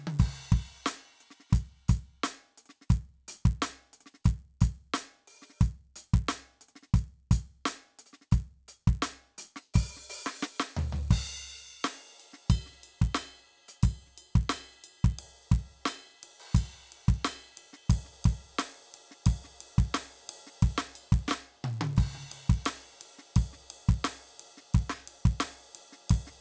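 Resampler restarted on every block, throughout the music: the sample-rate converter was run on each 10 ms block as if it were a fresh signal, so at every block edge it lacked the true neighbouring samples and left a small discontinuity. Because the blocks are so short, these errors merge into a steady buzz at 100 Hz that rides on the music and is present only while there is signal. The narrowed bandwidth fits a conversion from 44.1 kHz down to 16 kHz.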